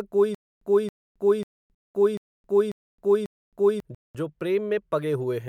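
A speech clip where, from 0.35 to 3.8 s, the same 274 ms burst repeats six times, each followed by about 268 ms of dead silence: a stutter with silent gaps, likely from a stalling stream replaying its last fragment. Hard-edged 200 ms holes also open at 1.75 to 1.95 s and 3.95 to 4.15 s, a gap between chunks every 2 s where silence separates successive audio chunks.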